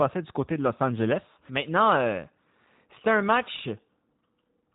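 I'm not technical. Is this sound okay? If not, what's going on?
No. The whole clip of speech has gone through the G.729 codec, a squeezing method used in internet phone calls. It doesn't send the actual sound. It sends a rough recipe for rebuilding the voice, so the result is understandable but slightly rough and artificial throughout. Everything above about 3.8 kHz is gone, which dulls the crisp edge. A plain telephone-style filter would only sound muffled; this codec also adds that buzzy, synthetic texture.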